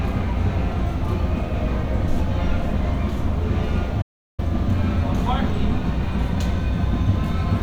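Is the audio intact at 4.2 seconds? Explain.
No. An audio dropout to silence runs from 4.02 to 4.39 s, about 0.36 s of silence with no room tone, most likely from the input being lost while recording carried on writing silence. The sound stops abruptly and resumes mid-flow.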